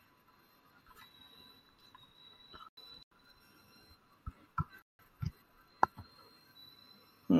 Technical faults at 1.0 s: none

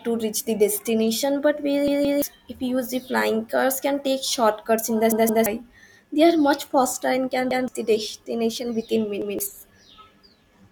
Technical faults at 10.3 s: none

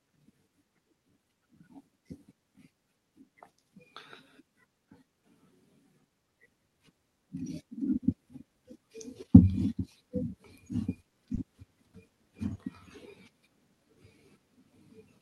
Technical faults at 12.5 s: repeated packet loss (robotic sound)

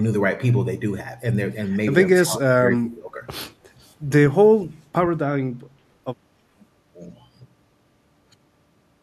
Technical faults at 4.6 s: none

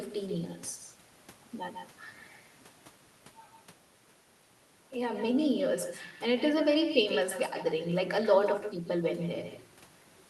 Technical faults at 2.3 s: echo with no canceller

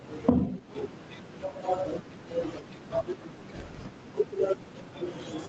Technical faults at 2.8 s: gain pumping

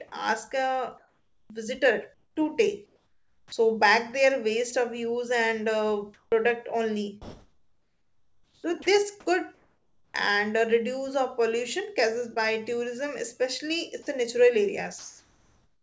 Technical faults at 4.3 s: none

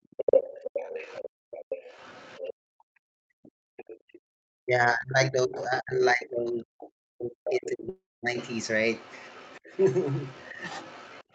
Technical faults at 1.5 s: other side's voice leaking through; background gated by the echo canceller

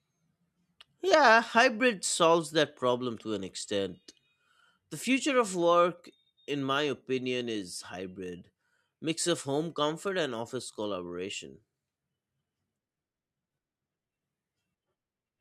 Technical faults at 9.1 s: none

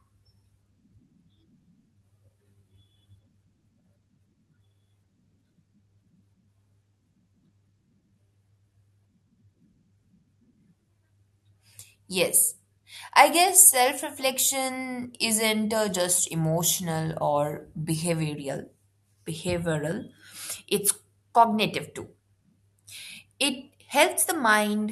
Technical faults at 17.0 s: none

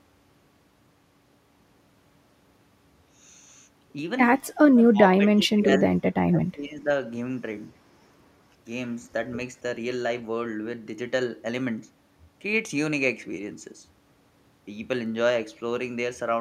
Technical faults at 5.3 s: speech suppressed in double talk

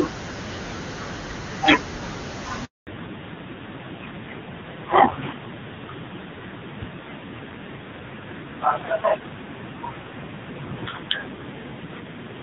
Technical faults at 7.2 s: fallback to narrowband

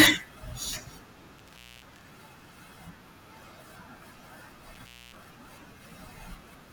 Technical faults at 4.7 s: intermittent contact

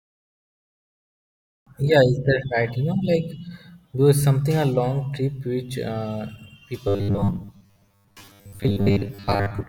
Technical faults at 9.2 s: robotic sound from repeated short buffers

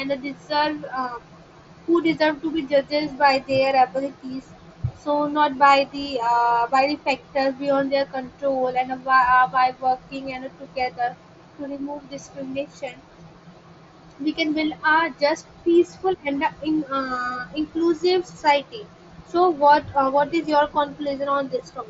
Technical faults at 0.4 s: none

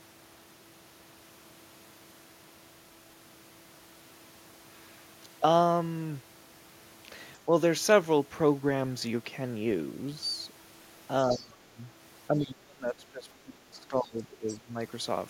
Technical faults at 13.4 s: speech suppressed in double talk

